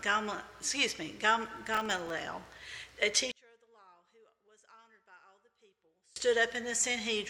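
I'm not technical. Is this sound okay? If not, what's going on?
No. From 1.48 to 2.10 s there is processor overload crackle: the computer fell behind and missed dozens of very short audio chunks, leaving tiny silent gaps heard as gritty crackling.

From 3.32 to 6.16 s the sound nearly disappears, most likely because one channel is inverted, so the left and right sides cancel each other when combined.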